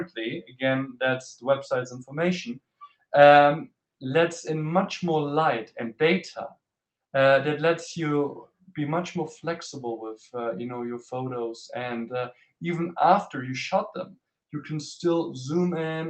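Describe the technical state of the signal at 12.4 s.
At 12.4 s the sound is cut by the noise suppressor. The dip runs from 12.33 to 12.52 s. The suppressor mistook part of the sound for noise and pulled it down harder than everything around it. The deepest drop is about 13 dB. Roughly 150 ms of sound is affected. Steady or decaying parts sink and their tails end early. Sharper onsets still come through. The call path also limits the band near 8 kHz.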